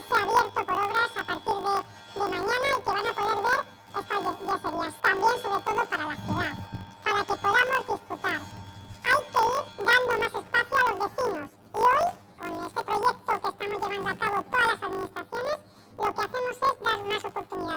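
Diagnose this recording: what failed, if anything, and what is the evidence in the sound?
Sample-format conversion failed: planar audio read as interleaved. Each 20 ms block stores all left samples and then all right samples, but it was read as alternating left-right pairs. Each half-block therefore plays at double speed, an octave up, first the left channel and then the right, so the overall pace holds. Because the blocks are this short, the whole recording carries a robotic buzz at the 50 Hz block rate rather than a clear octave shift.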